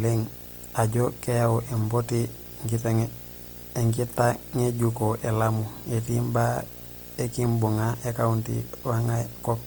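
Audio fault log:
throughout, video or display buzz: a fairly prominent buzz sits under the speech at the 59.94 Hz field rate, with hash above it and a very high 15.7 kHz whine at the line rate, as a screen or video cable couples its scanning signals into the audio path.
throughout, Opus compression: the speech sounds rough and grainy, with noisy texture where fine detail should be, and the band reaches 20.6 kHz. This is likely Opus in its CELT music mode, which fits roughly 24 kbps; short of bits, it fills bands with noise or folded copies instead of leaving gaps.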